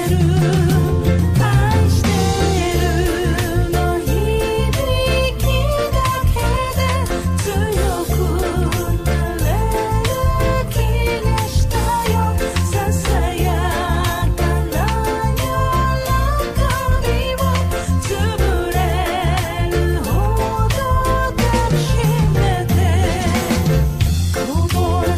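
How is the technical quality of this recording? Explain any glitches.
No audible technical faults.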